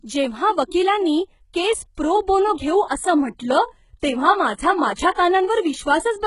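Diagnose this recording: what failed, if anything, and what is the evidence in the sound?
The failure is at the codec stage: the speech has been through heavy low-bitrate compression that most likely was HE-AAC, with treble sounding like a fit for roughly 12 kbps. Throughout, s sounds come out gritty and lispy, and the top end is metallic. On a spectrogram the upper band looks smeared and repetitive, copied up from lower bands instead of following real harmonics, and it stops dead at about 11.1 kHz.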